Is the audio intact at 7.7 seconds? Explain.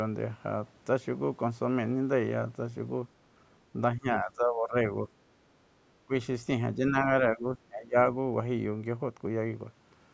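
No. From 7.33 to 7.96 s the speech dips sharply, by around 20 dB at its deepest, for about half a second in total. This is likely speech suppressed in double talk. The echo canceller mistook the talker for loudspeaker echo while both sides spoke, and turned the talker down.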